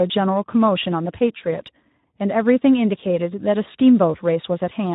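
Throughout the speech, the Speex codec is starved of bits for its excitation signal, which fits a setting near 11 kbps. The plainly audible result is a noisy, hoarse texture laid over every syllable.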